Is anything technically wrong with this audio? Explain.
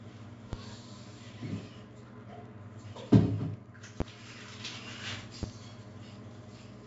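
Yes, two problems. The whole clip has heavy 4-bit ADPCM compression. Each sample is coded as a coarse 4-bit step from a prediction, so there's gritty hiss riding on every loud moment and smeared attacks. Nothing comes through above 7.7 kHz, which fits a 64 kbps stream at a low sample rate.

There's also a loud pop at 0.53 s, 4.0 s and 5.43 s, each lasting about 30 ms. The second one jumps roughly 20 dB above the surrounding sound, and the other two are about 15 dB above. They were likely caused by a sudden voltage spike, like a switch or static discharge, and the audio keeps playing underneath them.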